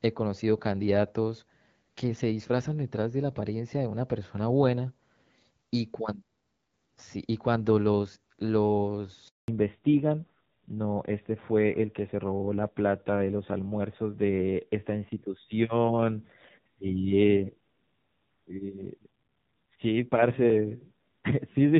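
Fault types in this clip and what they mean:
Handover gap: the call switched networks and no frames arrived, so speech cuts out for 200 ms from 9.28 s until the new link starts.
Fallback to narrowband: from 9.48 s nothing above 4 kHz remains, and speech turns duller and rougher, which fits a switch from HD Voice to AMR-NB.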